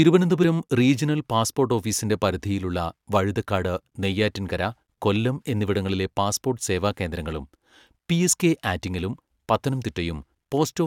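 At about 0.40 to 0.44 s the speech lurches forward by a sliver, with a brief glitch at the join, so a tiny slice of sound seems to vanish. This is compressed frames skipped: the decoder never played a stretch of about 20 ms of the coded stream, either lost from the file or rejected as damaged.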